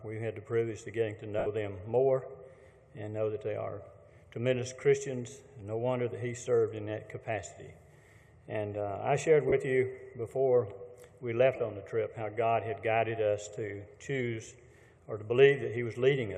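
A brief noisy smear replaces the sound at 1.38 to 1.47 s, 9.49 to 9.53 s and 11.56 to 11.60 s, with gaps of about 75, 38 and 30 ms. These are lost LE Audio frames. The LC3 decoder filled each gap by repeating the last spectrum with random signs, fading the longest. The light lossy compression underneath stays faint.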